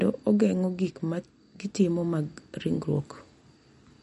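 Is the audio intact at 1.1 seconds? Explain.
No. At 1.1 s, as throughout the clip, the speech carries likely MP3 compression damage, plainly audible. Weak frequency lines flicker on and off between frames, sounding watery and swirly, at a low bitrate near 48 kbps. A spectrogram shows patchy gaps and a hard ceiling at 11.2 kHz.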